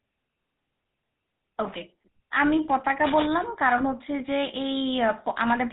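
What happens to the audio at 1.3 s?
At 1.3 s you're hearing the GSM full-rate codec, which runs through the whole speech clip. That first-generation phone codec models the vocal tract as a filter and feeds it a sparse pulse train, keeping only every third excitation sample, and it drops everything above 4 kHz. The damage is plainly audible: a dull, band-limited sound with that buzzy, gravelly roughness, which fits the old 13 kbps GSM rate.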